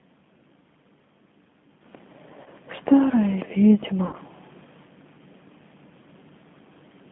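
Throughout, G.729 codec coding gives the speech a rough, synthetic texture, consistent with 8 kbit/s. On a spectrogram, energy is confined to roughly 150 Hz to 3.5 kHz.

At 2.44–2.49 s and 4.07–4.16 s, VoIP packet loss concealed by the speech codec covers about 20 ms and 60 ms of missing audio. The decoder repeats its last pitch and filter with falling gain, producing a brief buzzy tone or coloured noise. This shows as smeared, static harmonics and a decaying waveform envelope.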